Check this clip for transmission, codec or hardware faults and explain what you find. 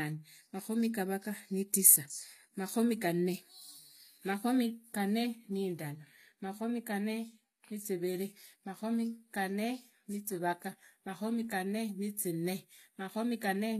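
There's one problem, and it runs through the whole clip: the speech has plainly audible codec damage that sounds like HE-AAC compression, likely at a low rate that fits about 24 kbps. The codec kept only the lower spectrum and rebuilt the top by copying lower bands upward under a rough envelope, with nothing above 14.9 kHz. The treble sounds synthetic, and the s sounds come across gritty and lispy.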